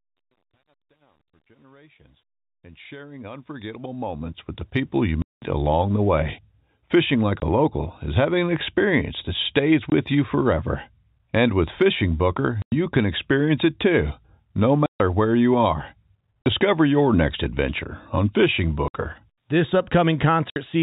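The speech opens with a fade-in that runs to about 5.06 s, and truncation distortion spoils its quiet start. The fade stage keeps only 10 bits and adds no dither. At low level the waveform collapses into a few coarse square steps. From 0 to about 3.19 s the sound is gritty. After that the grit eases as the level climbs.

Packet loss filled with silence then cuts holes in the speech. The gaps fall at 5.22 to 5.42 s, just before "along the way", and at 7.40 to 7.42 s. Another falls at 9.90 to 9.92 s, between "an experience that stays" and "you forever". Others follow at 12.62 to 12.72 s, at 14.86 to 15.00 s between "experience it too no" and "where you are", at 16.43 to 16.46 s, at 18.88 to 18.94 s and at 20.50 to 20.56 s. The receiver played silence where packets went missing. The holes run from 20 to 200 ms, which fits 20 ms packets. Their edges are hard.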